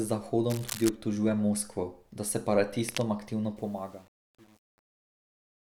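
Cable scratch noise runs from 0.49 to 0.90 s and again from 2.88 to 3.03 s in this speech recording: dense, uneven bursts of scratching and rustling sit on top of the speech, roughly 10 dB below it. The sound is likely a worn cable, connector or control being moved, so that its contact resistance jumps about rapidly and sprays noise into the signal for as long as the movement lasts. Truncation distortion on a fade affects the ending from 3.57 s to the close at 5.71 s. From 3.63 s onward its tail turns gritty. As the level drops, the waveform collapses into a few coarse square steps. That points to an undithered gain stage with only 8 bits of resolution.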